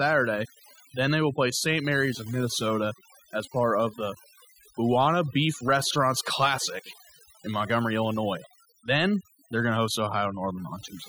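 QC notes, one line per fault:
Throughout: overdone noise removal. A noise reduction stage was driven far too hard on a noisy speech recording, so any frequency band that sits close to its noise estimate gets pulled down steeply or gated off entirely, and the quieter parts of the speech are removed along with the noise. Between phrases the background drops to an unnatural near-silence dotted with twinkling, chirpy specks.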